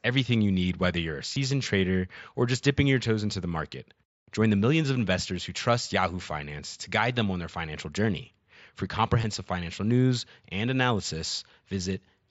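Concealed Bluetooth headset packet loss occurs at 1.34 to 1.36 s, between "need whether you're a" and "trader or just dipping", then at 6.23 s before "to guide them on", and at 9.22 s before "financial news and". Packets between headset and phone went missing. The receiver patched each gap by repeating recent waveform. The single lost frame at 6.23 s is nearly hidden, while the runs at 1.34 s and 9.22 s are brief buzzy tones with a small warble where real audio returns, under the wideband mSBC sound.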